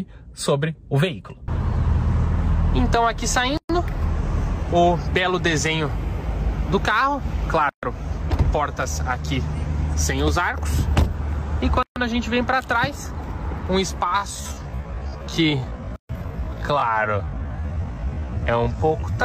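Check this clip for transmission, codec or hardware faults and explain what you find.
The clip has two faults: repeated silent gaps at the joins of separately encoded pieces, and a slowed, time-stretched final section.

Gap at a join of encoded pieces, at 3.57 s, 7.69 s, 11.83 s and 15.96 s, a regular four-second spacing. The audio was encoded in separate pieces and joined untrimmed, so each encoder's start-up delay and final-frame padding remain as silence. Each gap lasts about 120 to 133 ms, cutting into continuous sound with smeared edges before the sound resumes where it stopped.

Time-stretched section, from 14.02 s to the end. The pace drops suddenly to 0.55 times the original speed while the pitch stays the same. The likely cause is software stretching this part to fit a length, preserving pitch by repeating short pieces. That repetition makes the slowed sound drag, and the last join gap at 15.96 s falls inside this stretch.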